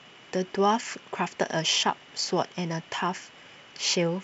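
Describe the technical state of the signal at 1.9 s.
At 1.9 s the speech is intact, carried by G.722 wideband telephone coding at 64 kbit/s with at most a faint trace of the codec.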